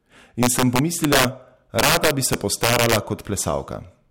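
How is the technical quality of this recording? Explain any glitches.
The speech is marred by integer overflow at 0.43 to 1.25 s and again at 1.79 to 2.97 s, where the level is pushed about 6 dB and about 8 dB past full scale. Instead of being limited, each overshooting peak wraps to the opposite sign, producing violent cracks far harsher than clipping.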